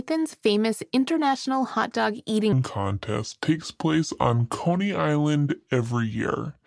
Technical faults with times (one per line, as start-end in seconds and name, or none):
2.53-6.66 wrong sample rate